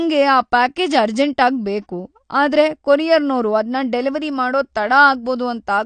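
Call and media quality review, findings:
Dull, smeared speech for the whole clip, with a fizzy, warbling edge on sibilants and held sounds; nothing above 9 kHz. Likely AAC compression, AAC-LC at a low bitrate, which fits about 32 kbps: encoder lowers its cut-off and coarsely quantises remaining bands, leaving spectral gaps and noisy fill.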